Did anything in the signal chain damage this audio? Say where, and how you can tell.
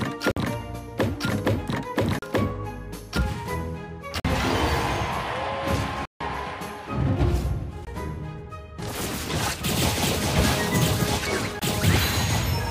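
Yes: a likely Bluetooth stall starved the headphone buffer, so the sound drops to silence at 0.32–0.37, 2.19–2.22, 4.20–4.25, 6.05–6.21, 7.85–7.87 and 11.59–11.62 s, then resumes.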